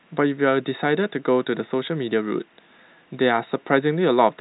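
Nothing goes wrong anywhere in this speech; it simply arrives over a G.711 telephone line, so everything tops out around 3.9 kHz, which is just the narrow sound of that phone format rather than a fault.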